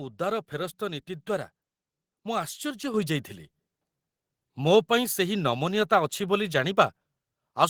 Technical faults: microphone volume stepped up

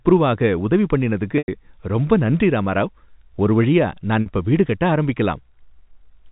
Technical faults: packet loss with pitch repetition

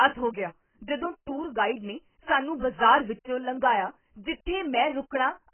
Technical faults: AAC compression

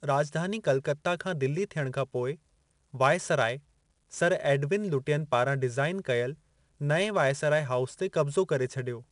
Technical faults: 4-bit ADPCM compression

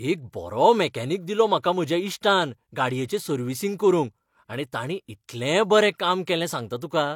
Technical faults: pre-echo

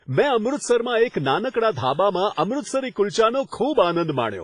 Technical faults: WMA compression; pre-echo

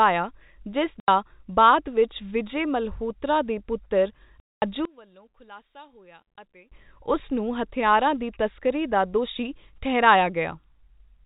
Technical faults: packet loss filled with silence; one channel inverted

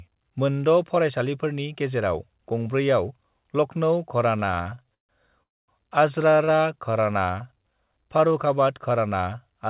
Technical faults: repeated stalls (stutter); call audio freeze; jitter buffer slow-down

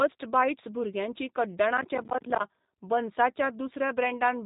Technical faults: G.729 codec; processor overload crackle

